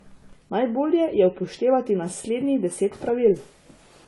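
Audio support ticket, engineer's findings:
Speech, full length. Low-bitrate audio saved at a high bitrate. Dull, band-limited sound. Nothing above 11.4 kHz. Coding artefacts of the first encode throughout. Current MP3 container looks high-rate but restores nothing. Likely cause: earlier low-bitrate AAC encode, then MP3 re-encode. First codec's losses and cut-off carried through. Second encode adds almost nothing.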